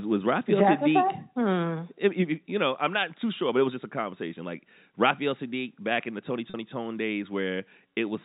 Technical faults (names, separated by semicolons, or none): packet loss with pitch repetition